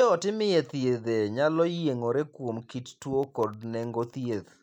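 Right after "yiengore kuom kit tuo", from about 3.23 s to 4.54 s, there's a run of periodic USB or driver dropouts. Something is stalling the audio path every 0.1 s, and each stall drops a tiny sliver of signal, well under a millisecond, that gets filled with silence. You hear it as a steady train of small ticks, roughly fifteen of them, riding on the speech at a clockwork ten-per-second rate.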